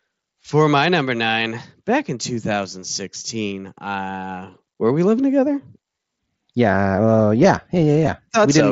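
Concealed Bluetooth headset packet loss occurs at 2.81 s and again at 8.07 s, each a single lost packet of about 7.5 ms. The receiver filled each gap by repeating the best-matching piece of the preceding waveform, so both dropouts are nearly hidden, with only a faint blip in the speech.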